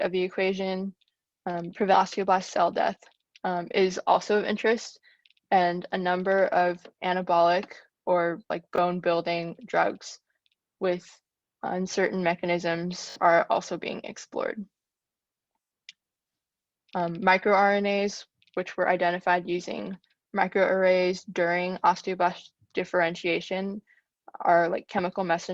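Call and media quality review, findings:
Skip ahead at 1.93 s: playback jumps forward with no filled gap, and roughly a third of a second of audio is missing, joined almost directly. This points to the jitter buffer discarding queued audio on overflow. Unlike a speed-up, it is a single abrupt cut, not gradual compression.

Jitter buffer speed-up at 2.18–3.31 s and 4.31–5.39 s: the audio runs about 5% fast at unchanged pitch and sounds hurried, with roughly 70 ms trimmed in each stretch. The receiver is removing pitch-period pieces to drain excess buffered delay. Unlike a skip, there is no audible jump.

Repeated buffer at 8.76–8.78 s (one extra play) and 13.10–13.16 s (three extra plays): the same short piece is replayed with hard joins. This fits a 20 ms playout buffer being replayed when new audio arrived late. Unlike a skip, the lost audio is covered by duplicated material rather than jumped over.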